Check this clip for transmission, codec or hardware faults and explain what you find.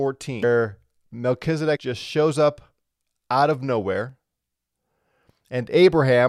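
The speech carries three short bursts of damaged data in a compressed stream. They fall at 0.43 s, at 1.75 to 1.77 s just before "just shows up", and at 4.10 s just after "out of". Corrupted bytes make the decoder misread frames and lose sync until it finds the next header. Each break is brief.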